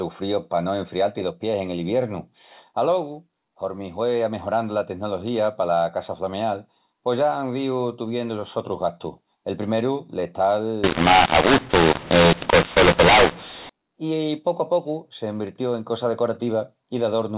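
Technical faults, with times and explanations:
10.84–13.69 s, mu-law and A-law mixed up: for just under three seconds the telephone audio, written with A-law, gets read back as if it were mu-law, so every 8-bit sample lands on the wrong point of the logarithmic curve. Loud bits swell or shrink unpredictably and the quietest samples get pushed well up from silence, which is why the speech turns harsh and gritty and the gaps hiss. The rest of the clip's G.711 path carries the normal 4 kHz telephone band.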